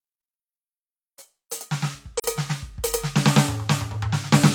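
At about 2.18 s the music drops into a brief, soft-edged hole lasting until around 2.25 s. That's AAC frame loss with muting. The decoder zeroed the missing spectrum, which fits a single lost frame of about 43 ms, and the overlapping windows fade the sound out and back in.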